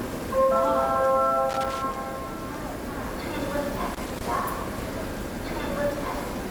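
From 1.49 to 2.06 s, and again from 3.94 to 4.26 s, the everyday sound is broken up by loose connector crackle: a worn or dirty contact flickering between connected and open, so the signal is chopped. Each burst is an irregular scratching. On a waveform the signal shows jagged dropouts and spikes, and a spectrogram shows scattered vertical broadband streaks across both spans.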